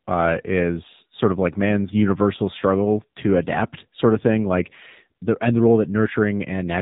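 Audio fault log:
Throughout: AMR narrowband mobile codec. The speech is cut off above 4 kHz and sounds thin, like a phone call. A plainly buzzy, synthetic edge runs through it. The codec rebuilds speech from a vocal-tract model and sparse pulses, and this coarseness fits a low mode near 7.4 kbps.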